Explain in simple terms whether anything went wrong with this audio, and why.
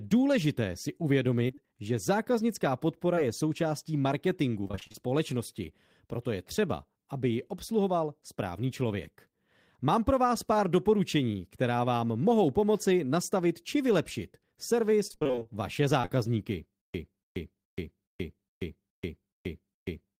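A few things went wrong here. Short concealed packet loss hits between "důležité si" and "že zákaznická", from 1.47 to 1.59 s, and again at 16.01 to 16.10 s. Bits of audio arrived too late, so the receiver bridged them and left a quick smear.

Repeated packet loss (robotic sound) shows up from 4.61 to 5.08 s and from 15.07 to 15.47 s. Roughly half of each stretch is patched-in filler, so it turns choppy with pieces missing.

From 16.81 s to the end there's a stutter with silent gaps. A 285 ms snippet keeps repeating with about 133 ms of dead silence between each one, most likely because playback stalled and kept retrying.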